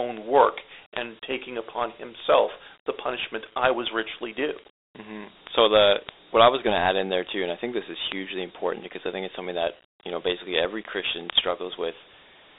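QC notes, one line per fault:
Throughout: Dialogic VOX ADPCM. The speech passed through 4-bit OKI ADPCM at 32 kbps, giving a gritty, plainly audible hiss and nothing above 3.8 kHz.
0.17 to 12.53 s: word clock ticks. An unlocked receiver clock drifting roughly 300 ppm misreads samples, producing sharp ticks about every tenth of a second throughout.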